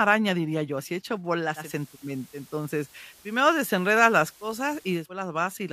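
At 1.55 s the digital radio blends to analogue FM, fading over 0.17 s. Hiss rises to roughly 30 dB below the speech, and level shifts about 2 dB. Digital returns at 5.10 s.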